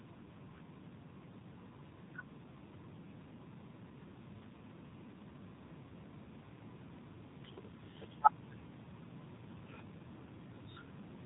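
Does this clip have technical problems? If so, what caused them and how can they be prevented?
Yes. Throughout the speech the voice sounds muffled and boxed-in, with a buzzy, somewhat synthetic edge that is plainly audible. That is the AMR narrowband mobile codec (AMR-NB). It samples at 8 kHz, so nothing above 4 kHz survives, and it rebuilds the voice from a vocal-tract model excited by a few pulses per 5 ms subframe. The degree of buzz suggests one of its lower modes, around 7.4 kbps. To prevent it, use a wideband path such as AMR-WB or EVS, or record locally instead of over a mobile call.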